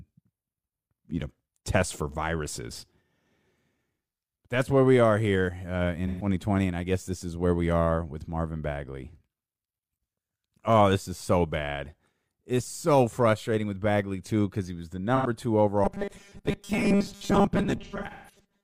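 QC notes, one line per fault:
6.07–6.27 s and 15.16–15.30 s, AAC frame loss with concealment: a smeared, noisy patch about 128 ms long just before "and I guess this", then about 85 ms just after "because he was the". The decoder refilled the gaps from the last good spectrum. Unlike buffer repetition, there's no steady pitch, just a brief wash.
15.84 s to the end, robotic sound from repeated short buffers: the sound becomes a rigid metallic buzz at 200 Hz that still loosely tracks the speech. This is likely from repeating the last 5 ms of audio while most new audio is skipped. The fixed pitch is what separates it from concealment smearing.
17.84–18.44 s, AAC frame loss with concealment: about 341 ms of lost audio scattered over roughly half a second, with the longest gap near 150 ms. The sound thins and dips toward silence before fading back, layered over the ongoing buzz, rather than holding one pitch.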